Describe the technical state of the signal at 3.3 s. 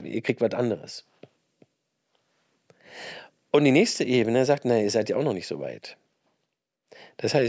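At 3.3 s the signal is intact, with no audible dropout, distortion, glitch or other technical fault at that point.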